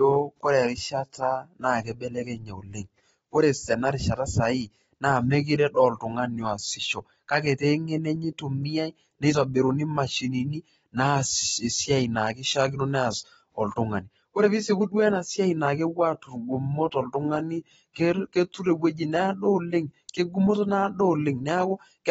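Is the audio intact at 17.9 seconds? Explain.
No. A transform codec has spread its quantisation noise across a whole block, so noise meant for a sharp attack also fills the quiet moment before it. This pre-echo runs from 17.93 to 17.96 s, about 26 ms, as a brief hiss just before "ketur ewoji", whose onset sounds softened.

This moment also carries AAC compression, likely at a low bitrate, which fits roughly 24 kbps AAC-LC. The low bitrate lowers the cut-off, leaving nothing above 7.6 kHz, so the speech sounds dull and smeared, with plainly audible warbling and fizz on sibilants.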